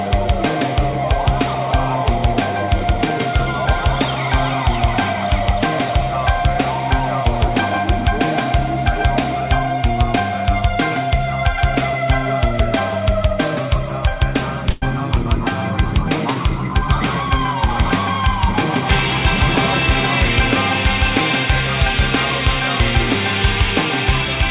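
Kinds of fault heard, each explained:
Call audio freeze: From 14.70 to 14.84 s the sound stops advancing and the last fragment is stretched into a short fading buzz or hiss for about 118 ms, with no silence under it. Afterwards the audio resumes exactly where it left off, so nothing is lost and the stream simply runs 118 ms later. The likely cause is packets delayed in transit, leaving the jitter buffer empty so the receiver had to extend what it already had.
Jitter buffer speed-up: Between 16.74 and 17.74 s the audio runs at about 111% of normal speed while the pitch stays the same, giving a hurried quality. The receiver is trimming short pitch-period slices over and over, removing roughly a tenth of a second in total, to bring excess buffered audio and latency back down. This happens within the narrow call-codec band, with nothing above 4 kHz.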